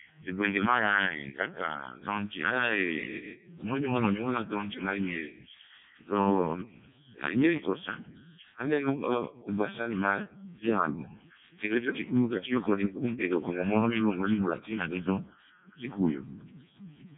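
From start to finish the speech has passed through the Codec 2 vocoder, and the damage is heavy. Nothing of the original waveform survives: the decoder rebuilds the speech from sine waves driven by pitch, voicing and a coarse spectral envelope, so it sounds robotic and buzzy. The smearing is severe enough to suggest the lowest 700 bit/s mode, and nothing reaches above 3.8 kHz. A band-limited or lossy waveform codec would keep the natural timbre, whereas this resynthesised sound does not.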